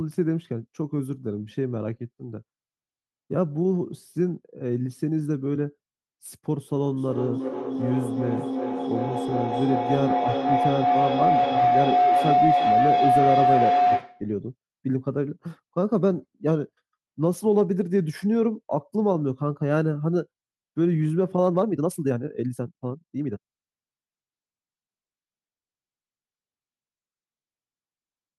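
A feedback howl runs from 6.97 to 14.3 s. Sound from a loudspeaker is picked up by a nearby microphone and returned with more gain each pass, so it narrows to a tone near 700 Hz, pulsing about every 0.4 s and peaking about 4 dB above the speech.

A time-stretched section follows from 21.44 to 23.42 s, where the speech suddenly runs 1.65 times faster at unchanged pitch and sounds hurried. Software likely compressed this stretch to fit a length by dropping short slices of audio.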